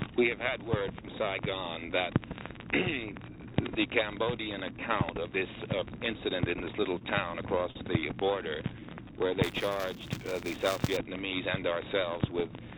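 Repeated stalls (stutter) run from 6.84 to 7.77 s. Packets arrived late, the jitter buffer emptied five times, and the receiver stretched the last sound over about 91 ms in total, the longest stall 39 ms, so the audio drags and hiccups without losing material. A jitter buffer slow-down follows at 8.80–9.28 s. To rebuild its reserve the receiver repeated single pitch periods and bits of pauses, adding 43 ms, so this stretch plays at 93% speed with unchanged pitch and drawn-out sounds. Buffer tearing then sets in from 9.43 to 10.97 s as a steady robotic buzz at 200 Hz, heard only while signal is present. The writing and reading positions of a ring buffer have slipped and cross inside every period, so a small slice of each buffer holds audio from about 20 ms earlier, with hard joins on both sides. The 200 Hz rate fits a 5 ms buffer period. Throughout, the call path cuts everything above 4 kHz, which fits a narrowband telephone codec such as G.711 A-law.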